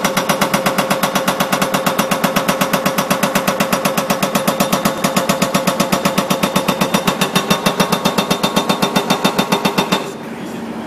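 Compressed frames were skipped at 4.98 s: about two frames never reached the decoder intact, so the audio jumps ahead by around 70 ms, which fits a 32 ms frame length.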